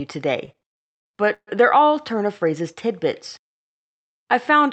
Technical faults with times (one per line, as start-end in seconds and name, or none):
0.45-1.49 repeated stalls (stutter)